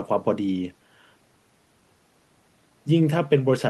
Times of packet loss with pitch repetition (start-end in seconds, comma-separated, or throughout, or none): none